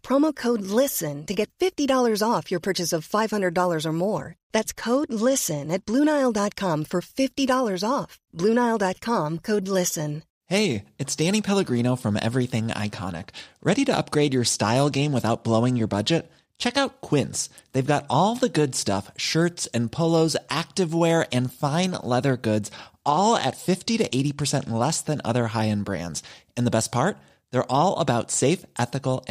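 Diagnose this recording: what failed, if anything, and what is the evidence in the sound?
The Bluetooth codec stage failed, with a Bluetooth SBC bit pool drop at 4.18–5.94 s, 13.16–16.83 s and 23.05–24.89 s. The speech loses treble and turns gritty, which fits the bit pool falling from 28 to 13, near 102 kbps, starving upper sub-bands and coarsening quantisation.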